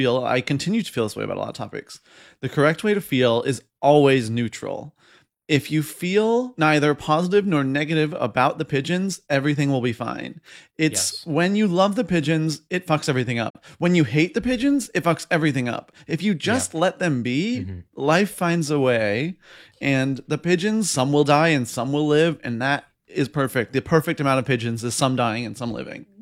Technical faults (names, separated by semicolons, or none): digital broadcast dropout